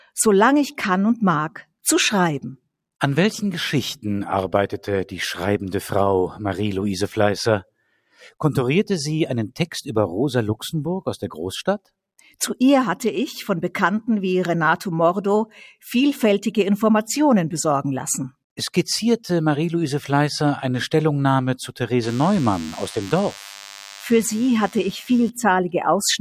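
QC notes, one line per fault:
7.64–8.34 s, sound cut by the noise suppressor: the audio sags sharply, with the deepest drop about 21 dB, and around half a second of the span is affected. The suppressor misjudged this stretch as background noise and pulled its gain down, so sustained and decaying parts thin out or stop early while sharp onsets still get through. Unlike a dropout or mute, the sound never vanishes completely, and the level dips with the content itself.
22.03–25.30 s, DECT cordless phone buzz: a thin, steady buzz at 100 Hz joins the audio, sitting roughly 20 dB under it. A nearby DECT handset or base transmits a radio burst every 10 ms, and the audio circuitry rectifies those bursts into sound, which produces a harsh, harmonic-rich tone. Mains hum sits at 50 or 60 Hz and sounds rounder. This buzz has a fixed 100 Hz repetition rate and a raspy, gated edge.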